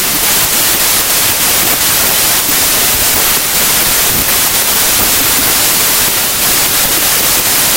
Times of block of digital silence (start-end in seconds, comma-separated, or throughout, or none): none